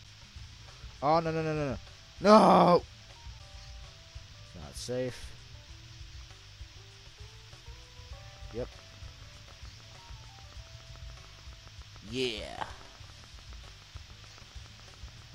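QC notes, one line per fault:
8.37–15.23 s, train of clicks: likely interference or a faulty connection injects a regular pulse 7 times per second, some fifty ticks about as loud as the sound.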